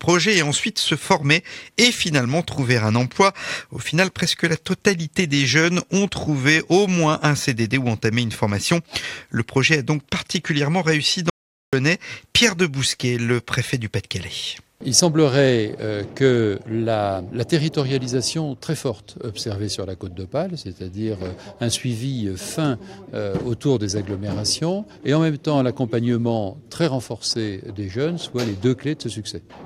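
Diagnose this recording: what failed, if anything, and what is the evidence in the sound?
The input feed, likely a disconnected device or failed link ahead of the recorder, stopped while recording carried on: an audio dropout to silence. From 11.30 to 11.73 s the sound cuts to silence, room tone included, losing 430 ms of material.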